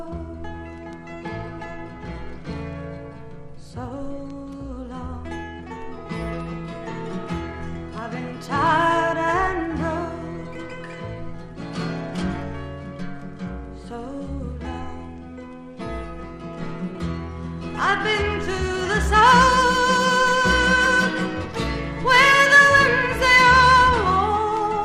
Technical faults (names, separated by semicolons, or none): MP2 compression